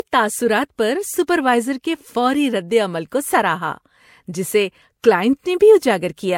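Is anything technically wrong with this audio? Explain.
Yes. Transcoding between lossy codecs runs throughout the speech. It likely comes from an MP3 pass near 96 kbit/s followed by Vorbis near 62 kbit/s. The second encoder spends bits re-coding the first one's artefacts, so smeared, swirly distortion from both stages is layered together, and nothing remains above 16.6 kHz.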